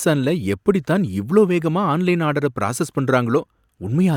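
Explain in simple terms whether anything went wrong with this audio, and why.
Nothing went wrong with the signal in this speech recording: there are no dropouts, glitches, distortion or other technical faults to be heard at any point.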